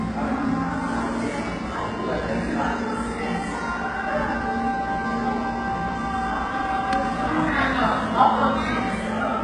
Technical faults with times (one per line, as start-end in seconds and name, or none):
0.00-9.44 HE-AAC compression